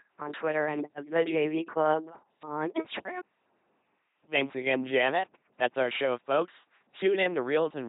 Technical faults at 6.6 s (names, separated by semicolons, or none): LPC-10 vocoder